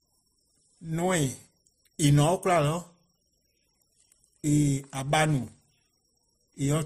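A speech clip. Nothing sounds above 15.2 kHz, and two kinds of compression artefact are heard together throughout. This fits transcoding between lossy codecs, likely Opus at about 48 kbit/s re-encoded to MP3 at about 41 kbit/s.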